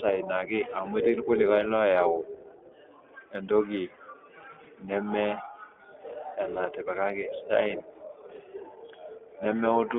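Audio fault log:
throughout, iLBC codec: The speech was squeezed through a narrowband VoIP codec that codes each frame's excitation independently, which fits the 20 ms, roughly 15 kbps mode. Everything outside 300 Hz to 3.5 kHz is gone, and the voice sounds plainly rough and synthetic.
4.64–4.68 and 8.36–8.40, lost iLBC frames: A single 20 ms packet went missing each time, and the decoder filled the hole by repeating the last pitch cycle mixed with noise. Each gap is a brief held, buzzy vowel, with the voice recovering almost immediately afterward.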